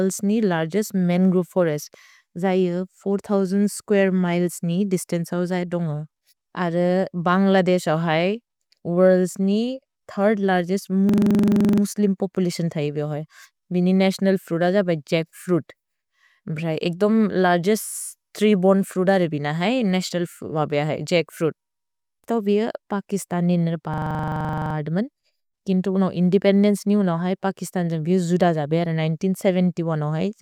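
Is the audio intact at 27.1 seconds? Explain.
Yes, the audio is intact at 27.1 seconds, with no audible fault at that moment.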